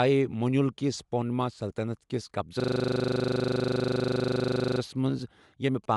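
Throughout the speech, the audio was most likely passed through Bluetooth LC3 compression at a modest bitrate. The transform coder discarded the top of the spectrum, leaving nothing above 11.5 kHz, and a plainly audible grainy, breathy edge that fits 10 ms codec frames at around 48 kbps.

From 2.6 to 4.8 s, a system hang loop occurs: the computer stalled while the sound hardware kept replaying one 40 ms stretch of its buffer, roughly 55 times. The speech freezes into a rough, steady buzz repeating at 25 Hz, and no audio goes missing once it resumes.

From 5.84 s to the end, GSM signalling bursts intrude. A nearby 2G phone exchanging signalling with its network produced radio bursts that the audio circuit rectified, adding a faint galloping dit-dit-dit of short 217 Hz buzzes, roughly 30 dB below the speech.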